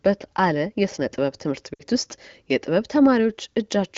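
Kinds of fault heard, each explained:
Lost AMR speech frames: at 1.73 to 1.82 s, corrupted radio frames failed their checksum, and about 60 ms of speech (consistent with three 20 ms frames) is replaced. The decoder repeats the last good pitch and vocal tract settings with falling gain, so the sound briefly smears and fades.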